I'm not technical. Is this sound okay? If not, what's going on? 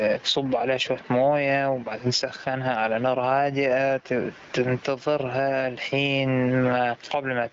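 No. Throughout the speech, loud and soft parts end up closer in level and the sound is squashed. This is gain pumping, likely from the level being set far too high, so an automatic limiter keeps pulling it back down. Unlike the pumping, the ordinary room noise in the background is just part of the recording and not a fault.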